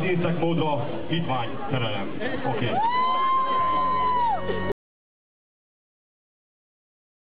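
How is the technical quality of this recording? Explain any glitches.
The recording has one clear glitch, an audio dropout to silence. At 4.72 s the sound cuts off mid-flow and never returns: everything from there to the end is dead digital silence, with no room tone or background hiss left underneath. That total absence points to the input itself being lost, likely through a disconnected device, a broken link or an accidental mute, while the recorder kept writing silence. Whatever happened after 4.72 s was never captured.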